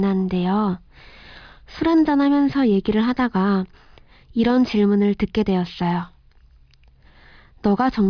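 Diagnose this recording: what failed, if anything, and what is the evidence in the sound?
Nothing in the speech signal points to a failure at any stage between capture and playback; the audio stays continuous and stable with no audible faults.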